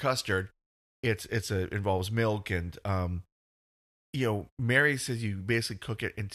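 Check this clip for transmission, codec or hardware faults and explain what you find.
Nothing stood out on listening to the speech here; no transmission, codec or hardware problem could be heard at any point.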